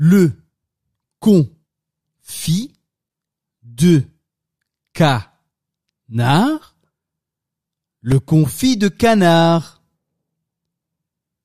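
At 8.12 s a repeated buffer produces a brief click as a piece of about 2.7 ms plays twice, which fits a 128-sample buffer arriving late.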